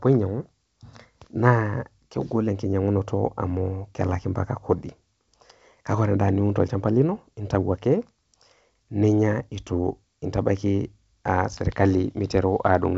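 Listening to this speech recording, carried over G.722 wideband telephone coding at 64 kbit/s, nothing stood out.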